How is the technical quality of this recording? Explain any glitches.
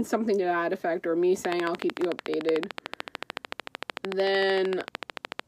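Quality is compromised by a train of clicks from 1.45 s to 5.41 s: roughly 50 near-identical pulses at a steady 13.4 per second, well above the sound and audible in pauses, likely from electrical interference or a faulty connection or power supply. Their regular spacing and uniform shape distinguish them from random crackle.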